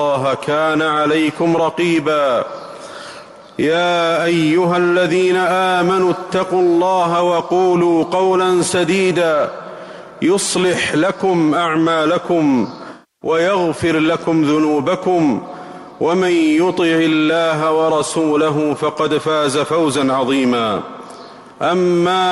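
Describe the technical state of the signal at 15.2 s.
Around 15.2 s the signal is intact, with no dropout, distortion, clipping or other technical fault to be heard at that point.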